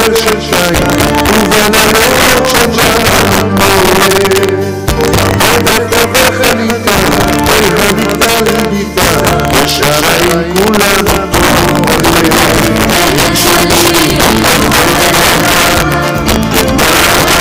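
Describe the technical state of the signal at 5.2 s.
Integer overflow is present at 5.2 s, as it is across the whole clip. The signal is driven about 8 dB past the integer limit, and instead of being held at full scale, each peak that crosses the limit wraps around to the opposite extreme. Only a small share of samples, around one in twenty, go over, but each one flips across the full range. These flips sound like harsh, violent cracks on the loudest moments, far sharper than ordinary clipping.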